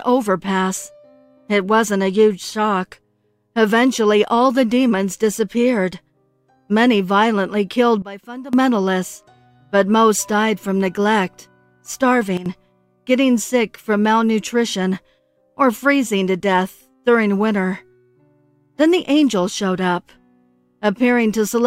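At 8.02 s the level drops by about 16 dB until 8.53 s, then at 12.37 s by about 12 dB until 12.46 s: a sudden gain jump, likely an unramped digital gain change. Unlike a fade or compressor action, sound and background noise step together instantly, without any slope.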